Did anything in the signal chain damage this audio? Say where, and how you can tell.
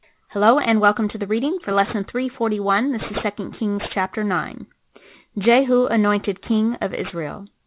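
Yes. The damage happened at a sample-rate conversion stage, where the audio was decimated without an anti-aliasing filter. The sound fits a drop from 44.1 kHz to 8 kHz, so everything above the 4 kHz fold point reflected back into the band as aliasing. It lasts the whole clip: sibilants in the speech turn gritty and metallic, with spurious, unrelated tones roughly 20 dB below the signal, and the spectrum runs hard up to 4 kHz.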